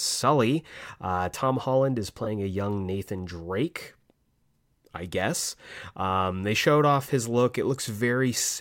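A corrupt frame concealed at 2.24 to 2.27 s, just before "a young", interrupts this speech clip for roughly 36 ms, a length that fits a single damaged AAC frame. Flipped bits spoiled that frame, and the decoder detected the damage and papered over it, either muting it or substituting a scrambled reuse of the previous good spectrum.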